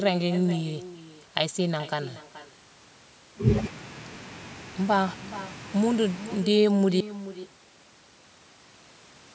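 Speech with echo and no canceller throughout: every phrase returns roughly 0.4 s later, about 15 dB quieter, showing as faint delayed copies of each syllable's harmonics on a spectrogram. At 7.01 s an audio dropout to silence begins and runs to the end, a flat line on the waveform with no room tone, likely from lost input.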